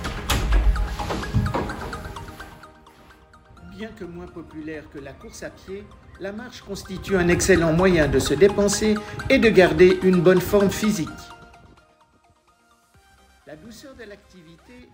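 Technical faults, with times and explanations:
6.6–7.32 s and 10.8–12.08 s, zipper noise: the level rises by around 20 dB, then later drops by around 25 dB, in unsmoothed 2 dB jumps at roughly 15 and 10 per second, so each jump clicks and a ticking zip rides on the sound.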